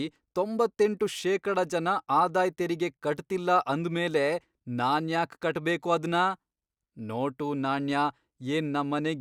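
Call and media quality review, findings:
Nothing stood out on listening to the speech in this recording.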